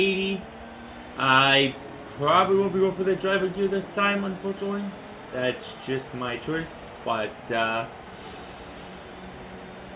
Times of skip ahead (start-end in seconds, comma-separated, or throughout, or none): none